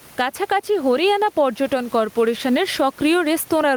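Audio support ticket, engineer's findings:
Gain pumping, throughout. Input gain set far too high, likely with a fast limiter or compressor clamping each loud syllable. Level swings around 10 dB. Room noise, about 33 dB below speech. Dynamics squashed.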